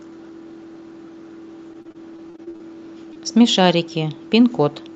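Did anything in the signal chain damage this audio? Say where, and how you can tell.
Yes, in the network stage. From 1.73 to 2.61 s there is repeated packet loss with a robotic sound: ten short gaps, the longest about 41 ms, patched by continuing the previous sound. Roughly a quarter of that stretch is synthetic fill, so the speech turns choppy.

A second, isolated event is a short concealed packet loss at 3.13 to 3.17 s. The decoder bridged a hole of about 20 ms by extending the last waveform and then blending back into the real audio. It is audible as a brief smear or wobble.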